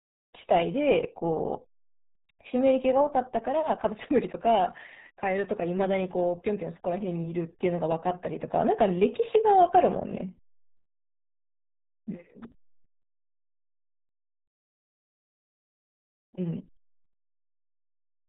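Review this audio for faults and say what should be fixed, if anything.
RealAudio 14.4 codec damage runs throughout: the speech is muffled with nothing above 3.8 kHz, plus a gargly quality a plain low-pass filter wouldn't add, pointing to roughly 8 kbit/s coding. Prevent it by sourcing the original recording rather than a dial-up-era stream.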